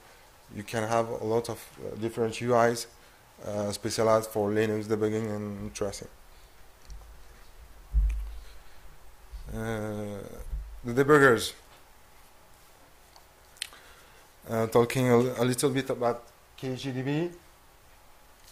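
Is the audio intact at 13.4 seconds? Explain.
Yes, at 13.4 seconds the audio plays through cleanly, with no dropout, click, distortion or other fault at that moment.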